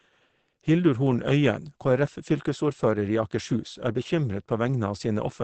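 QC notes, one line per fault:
Throughout, Opus compression: the speech was likely encoded with Opus at a very low rate, and the sound points to roughly 16 kbps with the encoder in its SILK speech mode at wideband. Nothing is left above about 8.6 kHz, so the voice is muffled and lacks air and sibilant crispness. The damage is plainly audible as a hoarse texture, because the speech model rebuilds the sound coarsely when there are too few bits to describe it.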